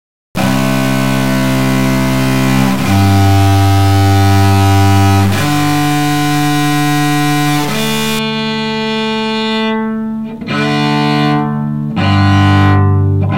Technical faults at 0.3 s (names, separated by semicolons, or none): stuck bit